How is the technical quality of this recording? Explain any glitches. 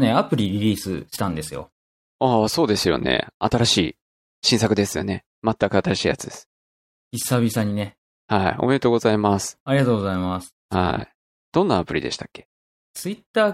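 The recording has one technical glitch: a gap at a join of encoded pieces, from 10.60 to 10.65 s. The speech drops to silence for about 50 ms and then resumes exactly where it broke off. This happens when segments are compressed separately and spliced without trimming. The encoder's start-up delay and the padding in its final frame both remain at the seam. The edges of the dropout are smeared by the codec.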